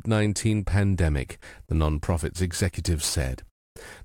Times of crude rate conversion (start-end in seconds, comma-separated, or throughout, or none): 1.53-4.05